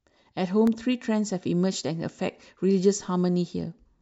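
From 0.42 to 0.92 s the speech carries CD scratch ticks: five short clicks, evenly spaced at roughly eight per second, the longest lasting about a millisecond. A scratch or blemish on the disc passes under the laser once per revolution, each time corrupting more data than the error correction can restore. The player then interpolates across or briefly mutes the damaged samples, leaving a regular train of tiny ticks of uneven strength.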